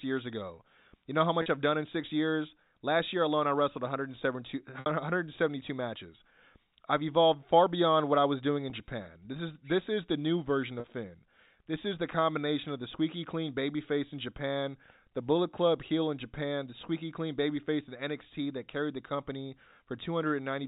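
Packet loss with pitch repetition occurs at 1.42 s after "know how", 4.80 s, 8.70 s after "what I was doing", and 10.80 s after "is the new version". Gaps of 20 to 60 ms are filled by repeating the last pitch period. The shorter ones sound like a brief, buzzy held note, while the 60 ms gap at 4.80 s fades into silence before the speech returns.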